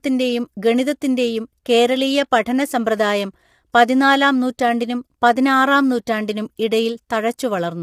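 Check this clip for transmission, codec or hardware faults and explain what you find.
There's one fault, and it runs the whole way through: low-delay AAC compression, likely AAC-ELD at a rate that sounds like roughly 32 kbps. At so low a bitrate it can't code each frame's frequency lines finely enough, so the speech comes across plainly rough and grainy, with noise filling the gaps between harmonics and a lowered or synthetic top end.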